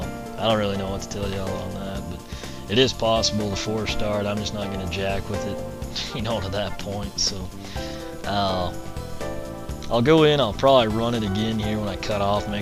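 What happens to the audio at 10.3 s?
At 10.3 s a steady buzz sits under the sound, pitched at 60 Hz with a gritty hash riding above it, roughly 20 dB below the main signal. It is video or display buzz, present through the whole clip rather than starting here. A screen or video cable is coupling its picture refresh into the audio path, and the 60 Hz field rate sets the buzz's fundamental while the sharp edges of that interference supply the hash.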